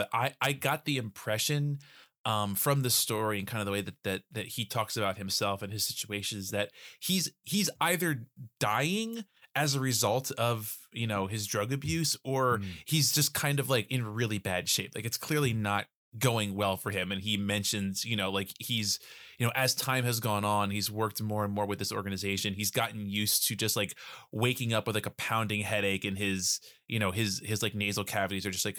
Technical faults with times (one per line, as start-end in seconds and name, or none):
none